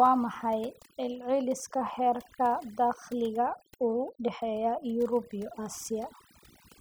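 Overdone noise removal runs through the whole of this speech recording. A noise reduction stage set far too aggressively is cutting individual frequency bands down to nothing wherever they sit close to its noise estimate. The background collapses into near silence dotted with twinkling specks, and the quieter parts of the voice are stripped away with it.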